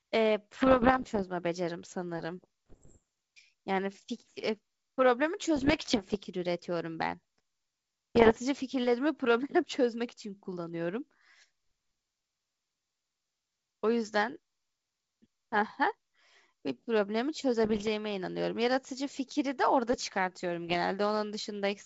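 Pops and rough, crackling bursts with brief jumps in level break into the speech at 0.60–1.23 s, 2.70–3.03 s, 5.56–6.16 s, 8.15–8.38 s, 17.64–17.89 s and 20.67–20.76 s. These are bit errors on an ADPCM link, here the G.722 wideband path, at around one percent, and about 1.5 percent in the second burst. Each flipped bit throws off the decoder's step size and predictor, so the disturbance rings on for milliseconds rather than clicking once.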